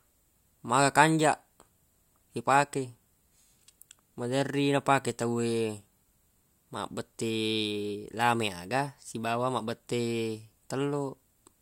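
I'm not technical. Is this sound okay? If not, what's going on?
Yes, this one's fine: nothing in the recording glitches, drops out or gets garbled, so there's nothing here to worry about.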